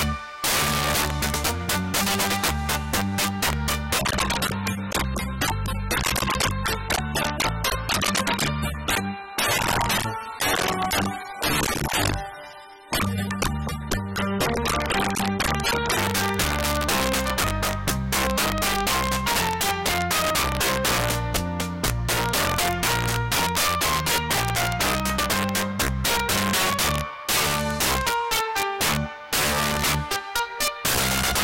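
Integer overflow runs through the whole clip. The signal is driven about 12 dB past the top of the integer range. Instead of being limited, those peaks wrap around to the opposite sign. Each one jumps across the full scale in a single step. Roughly one sample in twenty is affected. Every loud moment breaks into violent cracks. They are far harsher than ordinary clipping.

From 3.99 s to 15.99 s, the audio drops to an adaptive stream at a lower bitrate. The switch is abrupt and leaves no gap. The sound points to a step down from a high-rate AAC stream to one near 27 kbit/s. Nothing above 13.9 kHz survives in that stretch, so the top end goes dull. Codec artefacts thicken and the texture turns grainy. At 15.99 s the fuller quality snaps back.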